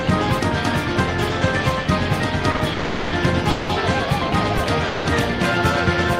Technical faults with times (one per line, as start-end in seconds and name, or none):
2.51-2.61 short stall from a late packet
2.73-3.14 call audio freeze
3.50-3.71 call audio freeze
4.58 repeated buffer
4.87-5.07 call audio freeze